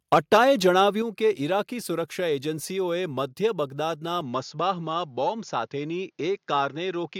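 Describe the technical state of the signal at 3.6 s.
At 3.6 s the speech signal is intact, with no audible dropout, distortion, clipping or other technical fault at that point.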